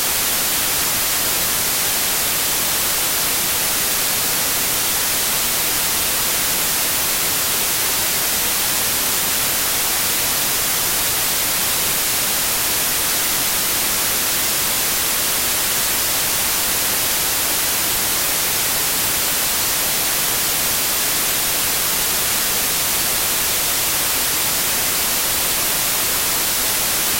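Throughout, wrong sample width: 32-bit samples read as packed 24-bit misalign bytes, burying the sounds in loud noise, slowed to 0.75x speed and lowered in pitch.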